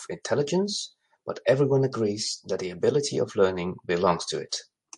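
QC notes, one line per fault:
Throughout, MP3 compression: the speech sounds watery and swirly, with metallic chirps on s sounds, a dulled top end and smeared attacks, plainly audible. The likely cause is low-bitrate MP3 coding, around 48 kbps, where the treble is cut and weak frequency lines flicker on and off between frames.
4.49 to 4.52 s, pre-echo: a brief hiss, about 18 dB up, leads a sharp attack by roughly 30 ms, softening its edge. The coding block, which fits a window near 48 ms, spreads noise sized for the loud attack back into the quiet gap before it, with no switch to shorter blocks.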